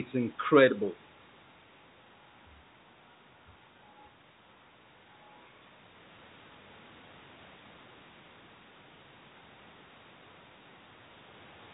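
The speech has no technical faults, carrying only the narrow bandwidth of a normal call path, with nothing above about 4 kHz after its 64 kbps G.711 mu-law coding.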